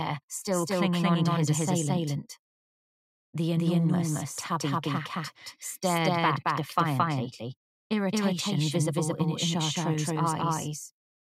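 From start to end, every sound is followed about a fifth of a second later by a copy at roughly equal loudness, a doubled audio track. It is likely a second capture through a slower path. The waveform shows each onset twice, and the spectrogram shows two identical full-band images without smearing.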